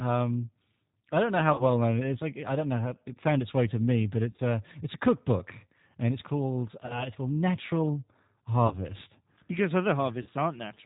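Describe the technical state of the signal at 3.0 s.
G.729 codec damage is present at 3.0 s and throughout. Speech is rebuilt from a vocal tract model and sparse pulses, sounding rough and synthetic with nothing above 4 kHz, which fits an 8 kbit/s stream.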